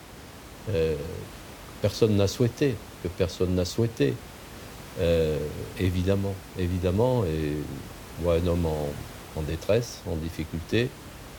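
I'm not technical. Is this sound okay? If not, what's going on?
Yes, this sound is okay: the background noise from the room is a normal part of the recording, not a problem.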